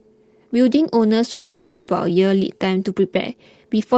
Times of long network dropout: 1.31-1.90

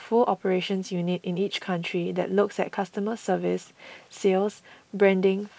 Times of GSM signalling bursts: none

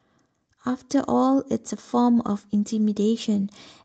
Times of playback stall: none

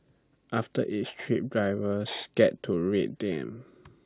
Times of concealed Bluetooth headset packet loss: none

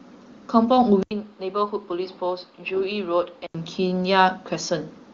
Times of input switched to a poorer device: 1.03-3.55

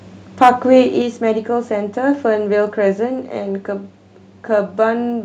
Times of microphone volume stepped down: 1.02

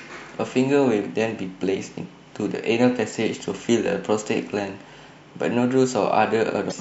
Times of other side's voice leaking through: none

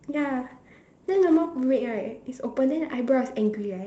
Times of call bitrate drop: 0.36-1.67

